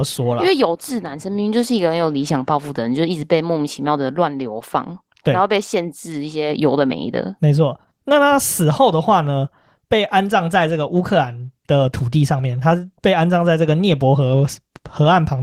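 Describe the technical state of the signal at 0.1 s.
At 0.1 s the speech already shows Opus voice compression, which runs through the whole clip. The codec's linear-prediction layer codes the core of the voice and models its excitation coarsely, leaving a hoarse, slightly robotic grain. A thinner layer above 8 kHz carries the top band, which fits hybrid mode at a bitrate around 16 kbps. Because the top end survives, this is coarse coding rather than simple band-limiting, whose only effect would be a muffled sound.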